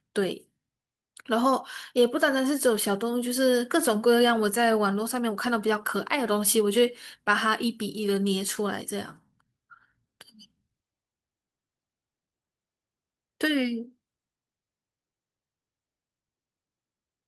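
No technical faults can be heard anywhere in this recording.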